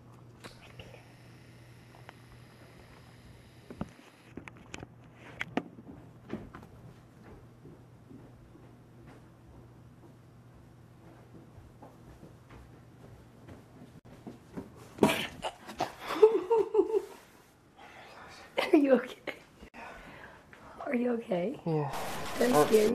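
At 13.99 s and again at 19.68 s the sound drops out for about 56 ms, then picks up right where it left off. That's a gap at a join of encoded pieces: each piece carried its encoder's start-up silence and end padding, and nobody trimmed them before splicing.

From 21.93 to 22.89 s the sound picks up a distortion that doesn't track the material cleanly. That points to a stuck bit, likely a data bit held at one value by a faulty line or converter, throwing roughly half the samples off.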